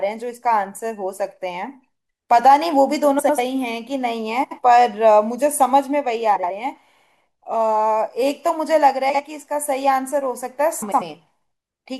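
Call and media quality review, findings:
Frames out of order at 3.19–3.39, 4.44–4.59, 6.36–6.51, 9.09–9.20 and 10.82–11.02 s. Likely cause: a jitter-buffer or depacketiser fault passing adjacent frame runs to the decoder swapped. Each stretch plays with its two halves exchanged, 96, 72, 72, 48 and 96 ms each, which suggests runs of a few codec frames. The speech becomes a garbled flutter. No duration is lost.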